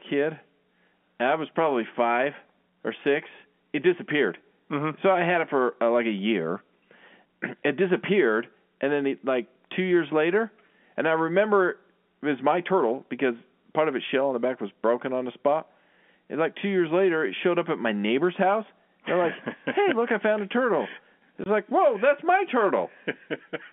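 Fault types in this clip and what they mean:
Packet loss filled with silence, 21.44 to 21.46 s: the speech drops out for 20 ms, which fits a single lost 20 ms packet. The receiver played silence in place of the missing audio rather than concealing it, so the signal stops and restarts with hard edges. This all happens within the narrow telephone band of the G.711 line, roughly 150 Hz to 3.4 kHz.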